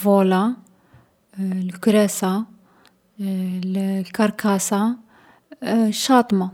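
No technical faults occur at any point in the recording.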